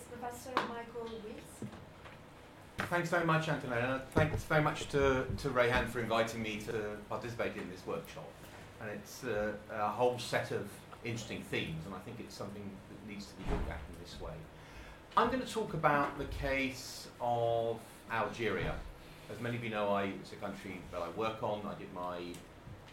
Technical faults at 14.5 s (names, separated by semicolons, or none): none